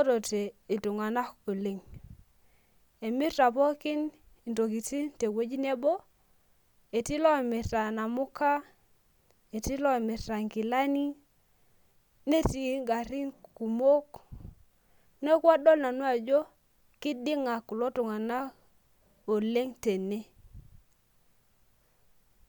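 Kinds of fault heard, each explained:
Nothing stood out on listening to this speech recording.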